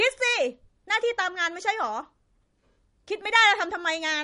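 From start to finish the speech sounds watery and swirly, and nothing remains above 10.6 kHz. This is likely MP3 compression at a starved bitrate, one that fits roughly 40 kbps. The encoder cut the treble and let weak frequency lines flicker between frames.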